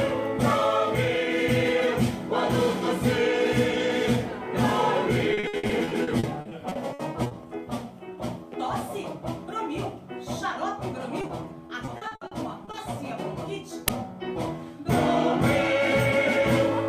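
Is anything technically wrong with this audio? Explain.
Yes, there are three kinds of fault.

Repeated packet loss (robotic sound) runs from 5.33 to 7.33 s and again from 11.67 to 12.75 s. The first stretch has 16 holes and the second has 8, none longer than 60 ms. Each hole is bridged by extending the preceding sound, which covers about a quarter of each stretch. The result is choppy, with pieces missing. The rapid run of patches is what separates it from a single dropout.

Short concealed packet loss occurs twice in quick succession, at 11.21–11.25 s and 11.27–11.31 s. In each case 20 ms failed to arrive and was synthesised by continuing the preceding sound before blending back in. It is heard as a brief smear or wobble. Because these are isolated events, they never build into robotic chopping.

An uninitialised buffer produces a crack at 13.88 s, about 6 ms long, which fits a 256-sample block. 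The block was played before any audio was written to it, so stale memory came out as a loud crack. Concealment smooths over a gap, but this event has nothing smooth about it.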